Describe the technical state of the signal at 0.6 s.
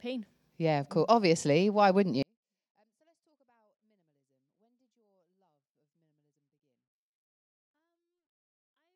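Around 0.6 s the speech signal is intact, with no audible technical fault at that point.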